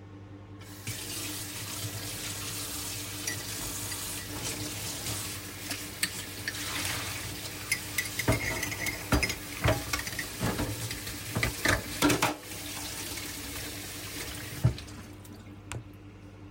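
From 0.90 to 2.15 s, six CD scratch ticks occur at a rate of about five per second, each a brief click or dropout, the longest around 2 ms. A surface blemish defeats error correction once per disc revolution, forcing the player to interpolate or mute the damaged samples.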